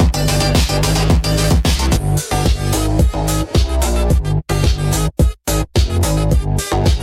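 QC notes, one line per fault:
0.00–2.59 s, computer activity noise: there's a buzzy, chirpy layer pulsing at around a hundred times a second, sitting roughly 35 dB under the sound, and it doesn't track the sound at all. That's the computer's load changes shifting the shared ground the audio circuit uses, so processor or graphics activity leaks straight into the signal. It drops away after 2.59 s, presumably once that activity settles.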